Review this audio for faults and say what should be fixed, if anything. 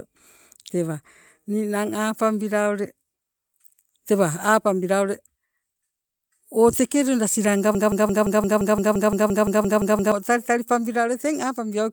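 There is clock drift between sender and receiver. The sending clock runs about 2 percent slow against the receiver's. The receiver's buffer keeps draining. To keep it fed, the receiver stretches the speech by repeating small pieces. Slight timing hiccups recur at uneven intervals through the whole clip. The result is a faintly unsteady pace. Lock both ends to a common clock, or resample the incoming stream to match the receiver's rate.

Repeated timing corrections run from 0.08 s to 11.74 s. Playback moves at an effective 98 percent speed. All the edits go one way: they repeat short fragments rather than cut them. Together they add roughly 300 ms over the stretch. Each repeat is tiny. They come unevenly, so the rhythm wobbles slightly rather than slowing smoothly. Use smooth adaptive resampling instead of discrete repeats, so the correction is spread evenly and stays inaudible.

A broken-record loop runs from 7.75 s to 10.12 s. 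A 0.17 s fragment repeats exactly, back to back, 14 times. The speech that belonged in those 2.4 seconds is gone. It is replaced by the stuttering loop. The likely cause is a stall in the player, encoder or stream, which kept resending the last fragment it held. Add stall detection that outputs silence or concealment after one missed fragment, instead of looping stale audio.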